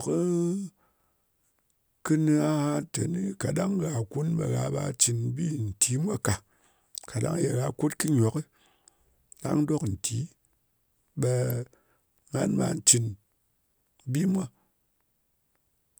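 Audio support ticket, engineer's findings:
Two sharp snaps over the speech at 8.08 s and 11.50 s, peaks around -15 and -20 dBFS. Electrical switching spike, likely a nearby switch or motor arcing into the line. Waveform: isolated needle transients. Spectrogram: thin full-band vertical lines.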